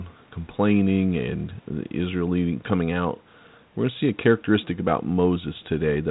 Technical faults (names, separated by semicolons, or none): none